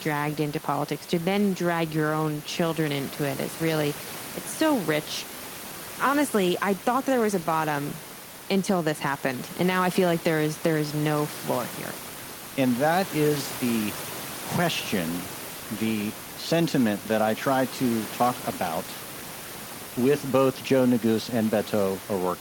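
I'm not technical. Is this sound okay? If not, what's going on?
Yes, nothing wrong here.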